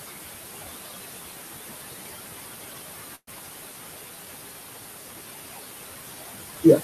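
Speech recorded with room noise about 11 dB below the voice, and a noise suppressor acts on it throughout. It pulls the noise down by about 19 dB between words and lets it rise under them. A burst of packet loss hits from 3.15 to 3.29 s. The last sound is held for about 116 ms and fades, then goes briefly silent. Speech resumes with about 120 ms missing.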